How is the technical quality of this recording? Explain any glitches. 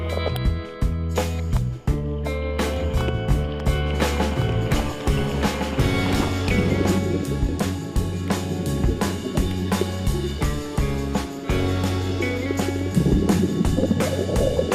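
The recording has one clear technical fault. A doubled audio track runs from 2.76 to 6.98 s: a second, full-band copy of the sound trails the original by roughly one and a half seconds, likely from a slower capture path or misaligned edit, sitting around 5 dB quieter, without decay or room colour, and starting and stopping abruptly.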